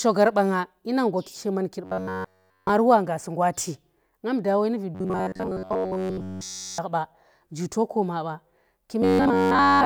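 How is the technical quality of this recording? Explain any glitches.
The recording has three robotic-sounding stretches, at 1.85 to 2.70 s (just before "wa ngasi ngwa"), 4.95 to 6.78 s (just before "ba ji to ko"), and 9.02 to 9.85 s. In each, the speech becomes a rigid metallic buzz at 93.8 Hz, entirely in the first two and mostly in the last. This is robotic sound from repeated short buffers, likely caused by one roughly 10.7 ms chunk looping while fresh audio was skipped.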